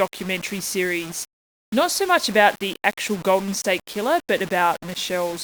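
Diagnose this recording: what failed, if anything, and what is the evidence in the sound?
The speech was most likely reduced at the sample-format conversion stage to 6 bits by plain rounding, with no dither: low bit depth without dither. Throughout, a grainy distortion tracks the voice at about 20 dB below it, roughening quiet passages and sputtering as the quietest sound collapses to silence.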